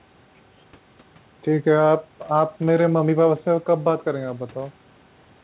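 Speech over a narrowband call line; no technical faults heard.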